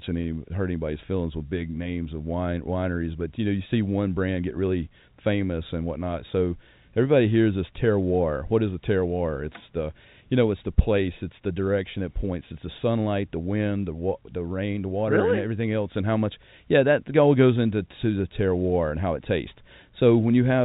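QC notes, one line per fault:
No faults found; the speech carries the expected G.711 telephone coding, with nothing above 4 kHz and only faint level-following quantisation noise.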